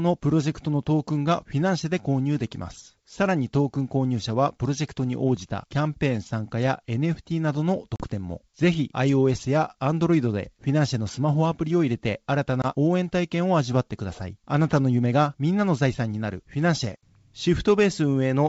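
Packet loss on an ADPCM call leaves hard-edged silent holes at 7.96–8.05 s (40 ms, about two packets) and 12.62–12.66 s (20 ms). Unlike a simple dropout, the speech returns slightly distorted until the out-of-step decoder resettles.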